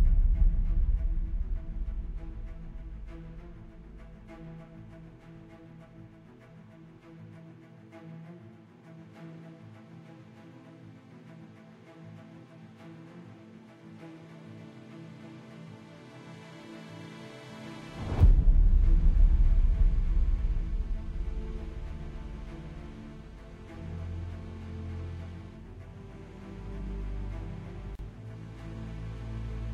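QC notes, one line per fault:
27.95–27.99 s, gap at a join of encoded pieces: the sound drops out for about 37 ms and then resumes exactly where it left off. Two separately encoded segments were butted together without trimming the encoder's leading delay and trailing frame padding, so that silence stayed in. On the waveform it is a flat stretch with abrupt, slightly softened edges; on the spectrogram, a thin vertical blank band cutting across all frequencies.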